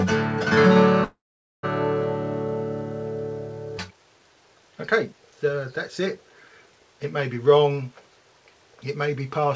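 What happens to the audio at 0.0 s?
Nothing goes wrong at 0.0 s; the audio is intact there, carried through a normally working call path whose codec leaves nothing above 8 kHz.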